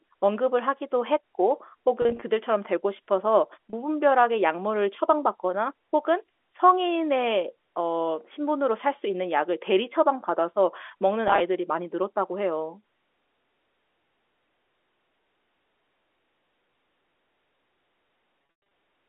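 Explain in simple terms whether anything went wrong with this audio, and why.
Bits of the audio stream were lost on the way, and the receiver papered over each gap by repeating the last sliver of sound. This is packet loss with pitch repetition, heard as brief buzzy, held-over blips at 2.02 to 2.22 s, 3.70 to 3.73 s and 11.28 to 11.40 s. The longest gap, around 18.39 to 18.71 s, fades briefly into silence before the sound returns.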